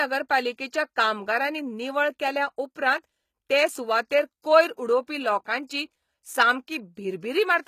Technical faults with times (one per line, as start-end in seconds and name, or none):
0.00-7.67 HE-AAC compression
4.09 pre-echo